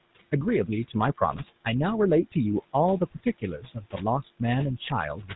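The room noise, sitting about 18 dB below the speech, dips between phrases and swells under them. These are noise suppressor artifacts, from a suppressor pulling the steady noise down by about 21 dB frame by frame. Throughout, the speech has a buzzy, gravelly roughness and nothing above 4 kHz. This is the GSM full-rate codec, which rebuilds the voice from a vocal-tract model driven by coarsely spaced pulses.

From 1.32 to 1.41 s the voice breaks into a brief squawk and gargle. These are GSM bit errors: corrupted filter, pitch or gain values distort a few consecutive frames.

Between 3.14 and 3.43 s, parts of the speech turn faint and swallowed, dropping by up to about 17 dB for roughly a tenth of a second in total. This is speech cut by the noise suppressor, which mistook those softer sounds for background and lowered them with it.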